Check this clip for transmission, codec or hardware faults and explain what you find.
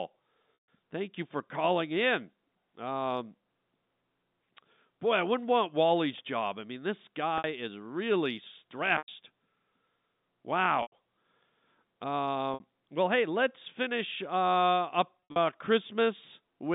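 Packet loss with pitch repetition occurs six times, all within a telephone-band signal carried by G.711 A-law coding, which passes roughly 150 Hz to 3.7 kHz.

The dropouts fall at 0.54–0.68 s (140 ms), 7.38–7.44 s (60 ms), 8.98–9.08 s (100 ms), 10.82–10.92 s (100 ms), 12.54–12.60 s (60 ms) and 15.26–15.36 s (120 ms lost, scattered over 160 ms, longest run 60 ms). The durations fit 20 ms packets. The receiver fills each hole by looping the last pitch cycle and fading it within about 50 ms. The 60 ms gaps sound like a brief buzzy hold. The 100 ms and 140 ms gaps outlast the fade and sink into silence before the speech cross-fades back in.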